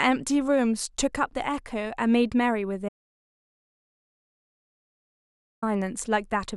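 At 2.89 s the speech cuts out mid-flow and returns at 5.62 s, an audio dropout to silence lasting about 2.74 s. The input was likely lost while recording continued, writing silence. Unlike a natural pause, no room tone remains.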